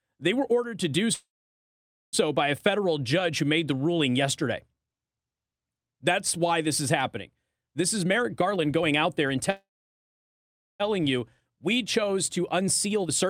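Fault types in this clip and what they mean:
Call audio freeze: The speech stops dead twice, each time with a brief fading tail and then near silence, and picks up exactly where it left off, which is most likely packets stalling and the jitter buffer running dry. After "were ordered to do" there's a gap from 1.13 to 2.15 s, about 0.87 s of it silent, before "by a federal judge". The second runs from 9.50 to 10.82 s, with about 1.16 s silent. Nothing is lost, just delayed.
Jitter buffer speed-up: The receiver is trimming excess buffered audio by snipping out tiny pitch-period slices over and over, so the talker sounds rushed while the pitch stays put. Right after "why this is happening", from 7.8 to 9.37 s, the speech plays about 20% fast, with roughly 0.3 s shaved off. From 10.92 s to the end the speech runs about 12% fast, again losing roughly 0.3 s, leading into "warrant in the".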